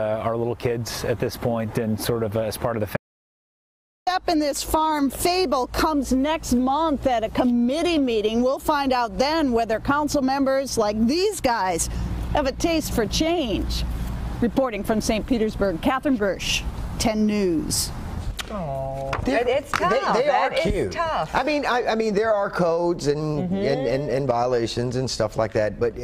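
At about 2.97 s the audio drops out to silence and stays dead until 4.07 s, roughly 1.1 s of silence with no room tone at all. That's an audio dropout to silence, likely a lost input or a momentary mute, and whatever happened there is gone.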